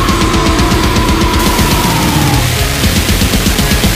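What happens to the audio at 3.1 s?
At 3.1 s the audio sits inside a stretch of low bit depth without dither, running from 1.39 s to the end. It sounds harshly grainy, with distortion only about 10 dB below the signal that moves with it. The likely cause is rounding to just 3 bits, which would show as a blocky staircase waveform and signal-following broadband hash on a spectrogram.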